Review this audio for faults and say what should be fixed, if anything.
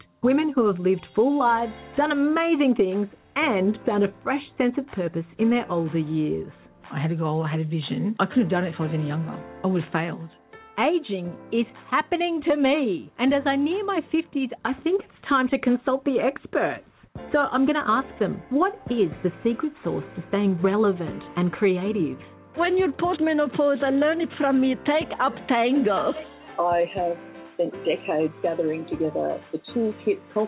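Nothing stood out on listening, so there is nothing here that needs fixing.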